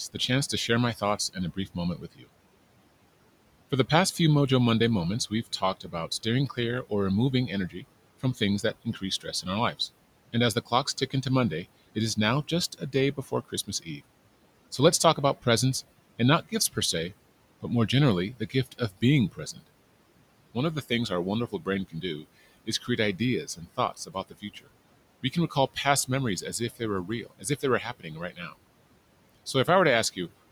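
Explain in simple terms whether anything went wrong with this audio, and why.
Yes, something went wrong: speech cut by the noise suppressor. The filter meant to remove background hiss mistook parts of the speech for noise and turned them down, so soft consonants and word endings sound swallowed or faint. It happens between 0.14 and 2.28 seconds, 5.3 to 19.63 seconds, and 20.54 to 28.54 seconds, a few brief moments at a time. Unlike a dropout, the sound never vanishes completely or clicks; it just fades, and the room noise dips along with it.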